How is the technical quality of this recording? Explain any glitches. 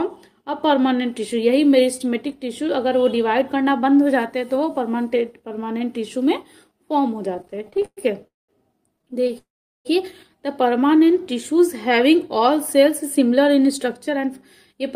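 The recording has clear network-delivery faults packed into its second half: two stutter episodes, two freezes, a stretch of slowed playback and a stretch of hurried playback.

Repeated stalls (stutter) occur from 7.37 to 8.25 s and again from 8.96 to 9.34 s. Packets kept arriving late, so the jitter buffer repeatedly ran dry and the receiver bridged each gap by extending the last sound. The first episode has 15 gaps totalling 258 ms, the longest 118 ms. The second has 11 shorter gaps totalling 117 ms, none longer than 20 ms. Each fills about 30% of its span. The audio drags and catches. On a spectrogram, the harmonic content smears into short repeated blocks with abrupt joins. The waveform shows small repeated segments and dips where longer fills fade.

A call audio freeze follows at 8.27 to 8.50 s and another at 9.38 to 9.87 s. The sound hangs briefly, then drops out, for 213 ms and 469 ms respectively, with 190 ms and 390 ms of near-silence. 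Afterwards, playback resumes where it stopped, about 0.2 s and 0.5 s later than before. The likely cause is packets held up in transit, emptying the buffer. A spectrogram shows a brief frozen spectral smear fading into a dark vertical band. The waveform shows a flat stretch.

Jitter buffer slow-down runs from 10.69 to 11.17 s. To rebuild its reserve, the receiver repeated single pitch periods, adding 40 ms and playing at about 93% speed with unchanged pitch. Sounds are drawn out slightly. On a spectrogram, harmonics stay at the same frequencies but features stretch horizontally. The waveform shows near-identical adjacent cycles.

Jitter buffer speed-up covers 13.03 to 14.26 s. With too much audio buffered, the receiver cut short pitch-period pieces, about 70 ms in total, giving roughly 106% speed at the same pitch. The passage sounds hurried. A spectrogram shows compressed timing with unshifted harmonics.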